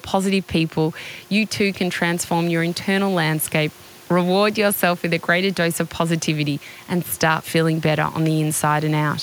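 No technical faults are audible.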